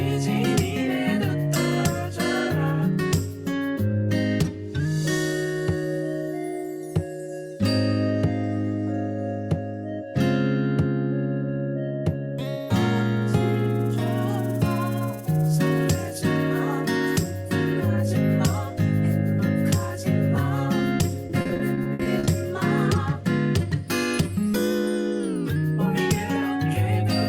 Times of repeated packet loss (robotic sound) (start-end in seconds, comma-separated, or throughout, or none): 21.27-22.29